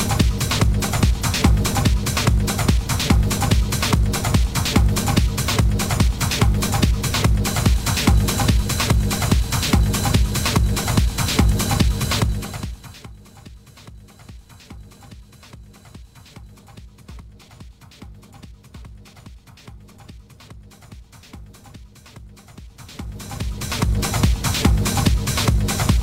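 From 12.17 to 13.14 s a fast ticking rides on the audio as the level drops by roughly 25 dB, and from 22.57 to 24.01 s a slower ticking returns as the level climbs back by about the same amount. This is zipper noise: the gain moves in 2 dB jumps, around fifteen a second on the way down and ten on the way up, with no smoothing, so each jump clicks.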